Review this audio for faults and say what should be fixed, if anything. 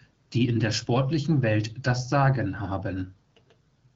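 Nothing stood out on listening to this speech, so there is nothing here that needs fixing.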